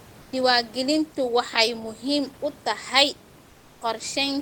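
A speech clip with room noise sitting about 27 dB below the voice. From 0.21 to 0.31 s, that background gives way to comfort noise: steady, featureless, about 3 dB quieter. The likely cause is discontinuous transmission filling a 100 ms pause.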